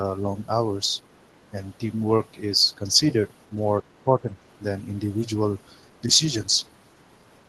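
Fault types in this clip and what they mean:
Speech suppressed in double talk: the echo canceller likely clamped down during overlapping talk, so the speech dips by some 20 dB between 3.8 and 4.35 s.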